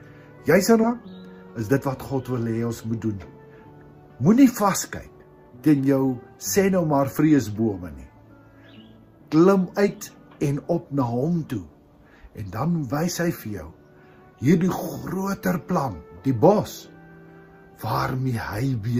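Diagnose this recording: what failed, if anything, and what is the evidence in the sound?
At 0.83 to 0.85 s the sound jumps abruptly forward with no gap, as if a chunk had been cut out and the two sides butted together. This is a skip ahead at the network and jitter-buffer stage: roughly 0.7 s of queued audio was discarded, so the two sides join almost directly.

From 0.93 to 1.79 s the sound runs hurried, about 110% of normal speed, yet its pitch stays the same. This is a jitter buffer speed-up: holding more audio than its target, the receiver clipped out short pitch-period slices, around a tenth of a second in total, to shrink the delay.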